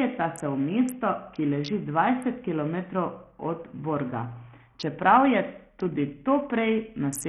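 A speech clip carrying heavy coding damage from start to finish. The treble is thin and unstable, dropping out and flickering, while a gritty noise floor and aliasing sit on top of the sound. The likely cause is Bluetooth SBC compression at a very small bit pool, which fits a rate near 48 kbps. Its fixed sub-band split starves the upper bands of bits, and what remains is coarsely quantised.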